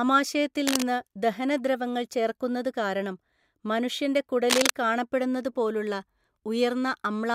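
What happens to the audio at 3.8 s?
Nothing goes wrong at 3.8 s; the speech carries on intact through that moment with no dropout, click or distortion.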